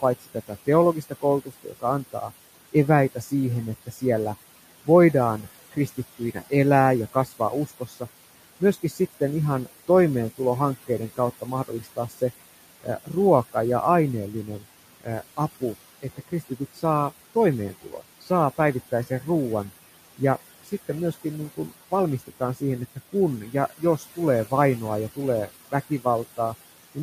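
From the start, the background pumps down between phrases and swells under the speech. These are noise suppressor artifacts: the room noise, sitting about 16 dB below the speech, is pulled down by about 16 dB frame by frame. From 0.01 s to 27.02 s, soft consonants and word endings sound swallowed and faint. This is speech cut by the noise suppressor, which treats quieter speech as noise and turns it down by as much as about 19 dB.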